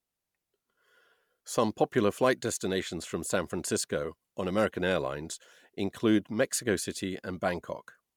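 Speech recording with no audible technical faults anywhere in the clip.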